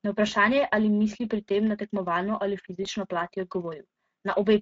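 Throughout, the speech carries plainly audible Speex codec damage. Sparse excitation makes it hoarse and noisy, which fits a setting near 17 kbps. At 2.83 s comes VoIP packet loss concealed by the speech codec. About 20 ms of audio was lost. The decoder stretched the preceding sound and faded it out, and the loss ends at 2.88 s.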